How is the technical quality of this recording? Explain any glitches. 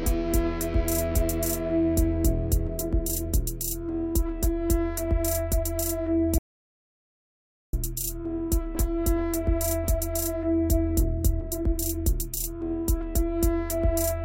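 There's one clear glitch: an audio dropout to silence from 6.38 s to 7.73 s, so roughly 1.35 s of the recording just isn't there. The sound cuts off abruptly and snaps back in mid-flow, and the gap is dead digital silence with no room tone underneath. That points to the input likely being lost for a moment, through a loose connection, a failed link or an accidental mute, while the recorder kept writing silence. Whatever happened during that stretch is gone.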